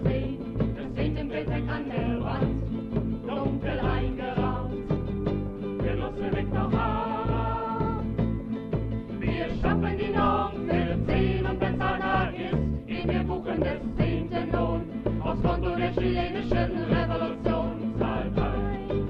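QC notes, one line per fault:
11.74 s, corrupt frame decoded: damaged compressed data, likely a few frames, was played as-is, putting misplaced energy into a short chirp or burst of noise peaking around -20 dBFS.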